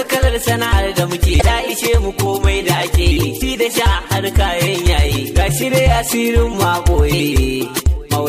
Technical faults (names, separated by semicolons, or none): damaged data in a compressed stream